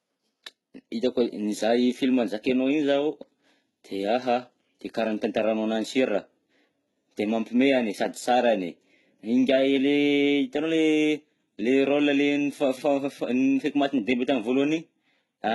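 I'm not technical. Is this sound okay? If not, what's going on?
No. The whole recording sounds processed. S sounds come out gritty and lisping, and the top end feels artificial and stops short around 12 kHz. This is likely heavy HE-AAC compression, which rebuilds missing treble by copying lower sounds upward.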